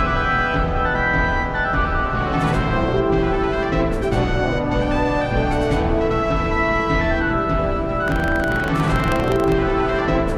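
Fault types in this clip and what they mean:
Buffer tearing: the program filling the ring buffer and the hardware reading it have slipped out of step, so each period carries a small sliver of audio about 70 ms old, hard-joined in. From 8.04 to 9.53 s this makes a 25 Hz robotic rattle.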